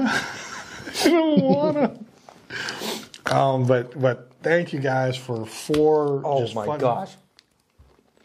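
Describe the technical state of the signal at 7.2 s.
Around 7.2 s the signal is intact, with no audible fault at that moment.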